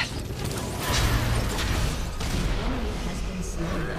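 No technical faults are audible.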